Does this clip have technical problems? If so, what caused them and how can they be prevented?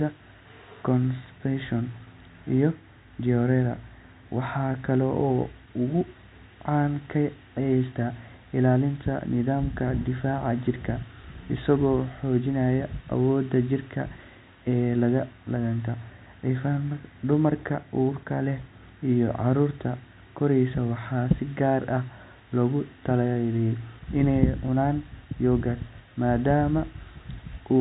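No, no technical problems here.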